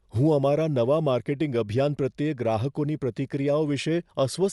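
From start to finish the speech sounds dull, with nothing above about 11.5 kHz and a rough, fluttery noise clinging to voiced tones. That's likely Dolby Digital compression at a low bitrate, which fits 64 kbps, with starved frequency lines filled in by dither noise.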